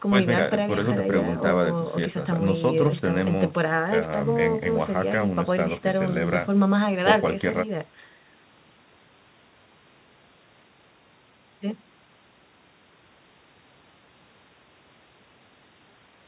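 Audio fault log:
No faults are heard in this speech clip. It has passed through a WebRTC call path, and nothing is heard above about 4 kHz, the narrowband telephone sound expected of a G.711 mu-law call at 64 kbps.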